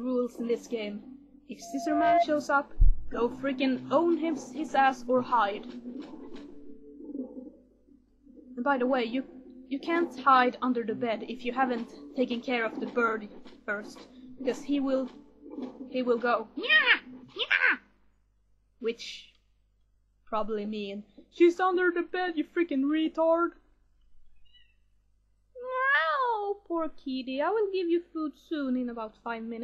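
Right near the start, from about 1.62 to 2.27 s, there's a loudspeaker feedback squeal. A tone at 687 Hz swells up over roughly half a second and ends up sitting about 5 dB above the programme before it cuts off. What's happening is the mic is catching its own speaker output, and at that one frequency the round trip gains more than it loses, so the tone keeps feeding itself until the loop gets broken.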